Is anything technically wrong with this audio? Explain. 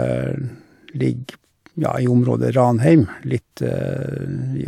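No, nothing technically wrong here.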